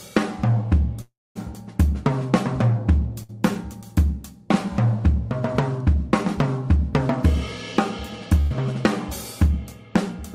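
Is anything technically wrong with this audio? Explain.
Yes, there are gaps in delivery at three points.

From 1.01 to 1.37 s there is likely a long network dropout: the receiver stopped getting audio for about a third of a second and had to improvise. The last sound is stretched into a decaying buzz or hiss, which dies away so that roughly the final 0.23 s is near-silence. When the sound returns it has jumped ahead, and about 340 ms of material is simply gone.

Two shorter bursts of packet loss occur at 3.23 to 3.31 s and at 8.41 to 8.52 s. In each case a short run of packets failed to arrive in time, about 60 ms and 100 ms respectively. The receiver bridged each hole by holding the previous sound and fading it down, so there is a brief smeared, sustained patch. Playback then resumes slightly further along, with that slice of audio missing.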